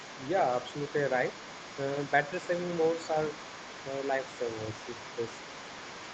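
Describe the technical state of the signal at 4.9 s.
Echo cancellation likely failed, so the other side's voice leaks through at 4.9 s, as throughout 0 to 6.1 s, faintly, roughly 15 dB below the talker.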